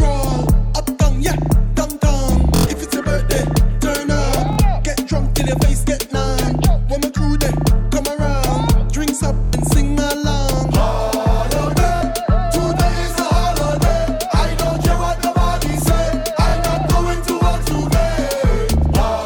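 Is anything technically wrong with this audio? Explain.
Yes. Bluetooth stutter occurs five times, at 2.56–2.67 s, 4.53–4.59 s, 9.45–9.54 s, 11.96–12.02 s and 16.49–16.55 s. Each time, packets arrived late or not at all, so the receiver replayed its last short buffer until fresh data came in. The result is a brief buzzing, machine-gun repeat of a tiny slice of sound, lasting about 46 to 93 ms, which fits two to four lost packets of roughly 23 ms each. The audio then picks up further along, as though it had kept playing through the gap.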